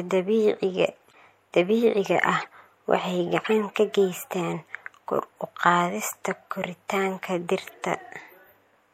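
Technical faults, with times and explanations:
Throughout, MP3 compression: the speech has a plainly audible watery, swirly edge with dulled treble and smeared consonant attacks. That's likely a low-bitrate MP3 encode, around 64 kbps by the sound of it, cutting the top end and letting weak frequency lines flicker between frames.
1.10–1.14 s, corrupt frame decoded: a faint blip, about −45 dBFS, just before "dabiiciga ah waxay". A damaged compressed frame or two got played anyway, so misread data put stray energy at the wrong frequencies for that brief stretch.
2.41–2.48 s, corrupt frame decoded: a much louder chirp, peaking around −20 dBFS, right after "dabiiciga ah". This one spans roughly three frames' worth, so the wrongly placed energy lasts a touch longer.
3.44–3.53 s, corrupt frame decoded: another loud burst near −20 dBFS, between "dabiiciga ah waxay" and "ka geystaan kor u". It's again about three frames long, with garbled gains or codes throwing energy into the wrong frequencies and heard as a squeaky chirp.
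7.68–7.74 s, corrupt frame decoded: a quieter blip around −40 dBFS, about two frames long. Same mechanism: the decoder played damaged frames rather than dropping them, and the misplaced energy comes through as a short squeak.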